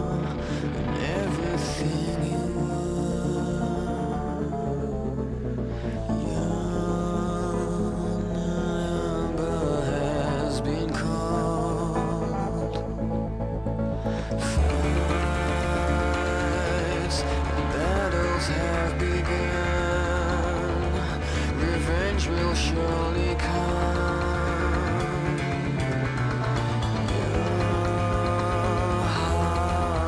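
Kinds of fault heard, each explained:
No kinds of fault are heard in this clip.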